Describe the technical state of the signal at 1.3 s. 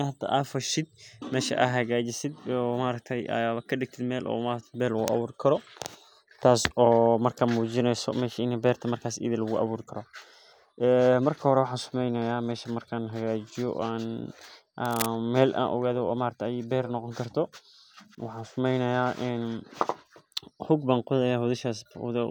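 At 1.3 s the speech signal is intact, with no audible fault at that point.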